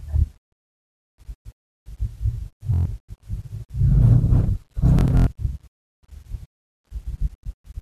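At 2.74 to 2.86 s the speech hits a Bluetooth stutter: late or dropped packets leave the receiver looping its last short slice, giving a buzzy machine-gun repeat. A choppier, scattered burst runs from 4.99 to 5.27 s, and a brief one at 7.39 to 7.43 s.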